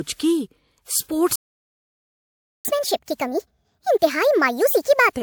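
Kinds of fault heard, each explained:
Transcoding between lossy codecs: The speech carries two layers of coding artefacts heard at once, which likely comes from a WMA stage at 96 kbit/s followed by MP3 at 96 kbit/s. The second encoder spends bits on the first one's artefacts, and the lowest cut-off in the chain stays.
Playback stall: From 1.36 s to 2.65 s the speech stops mid-flow and the output goes silent for about 1.29 s. This is likely a player starved of data or blocked before it recovers and continues.
Catch-up at higher speed: From 2.65 s to 5.13 s the speech runs at 1.5 times normal speed, and the pitch rises by roughly seven semitones. The player is resampling its backlog to win back the lost time.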